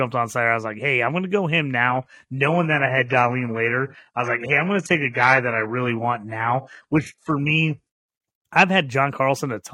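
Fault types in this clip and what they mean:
Adaptive stream at a lower bitrate: the player switched to a cheaper rendition while the connection slowed. From just after "going to go him" at 1.89 s until 7.89 s, the speech loses everything above 11.5 kHz, which points to a step from 96 kbit/s AAC down to 12 kbit/s HE-AAC. Unlike a dropout, the sound never breaks off, and unlike a fixed filter, the quality changes suddenly and then returns.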